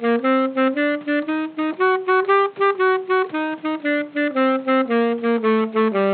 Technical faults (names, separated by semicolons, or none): none